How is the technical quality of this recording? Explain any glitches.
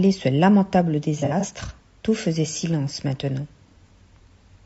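The quality's held back by codec damage throughout, plus one clear glitch a bit over a second in.

The whole clip has the rough, grainy texture of low-delay AAC compression, likely AAC-ELD at something around 32 kbps. Its short frames can't separate the speech harmonics cleanly, so noise fills the gaps between them and the top end sounds thin and slightly synthetic. At that rate the damage is plainly audible across the speech.

From 1.19 to 1.45 s there's AAC frame loss with concealment. Roughly 120 ms of audio went missing, scattered over about 240 ms, with the longest gap at around 70 ms. The decoder patched each hole by reusing the last good spectrum, so that stretch sounds smeared and a bit noisy and phasey rather than dropping cleanly to silence.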